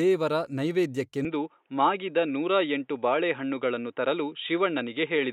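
At 1.25 s the speech turns abruptly dull and boxy and stays that way to the end, with nothing above 3.8 kHz from then on. The likely cause is an input switched to a poorer device: the recording moved mid-take to a narrower-band microphone or headset profile. There is no gap at the change and no clear level step. A faint new noise floor sits far below the voice. On a spectrogram the upper band simply stops at 1.25 s.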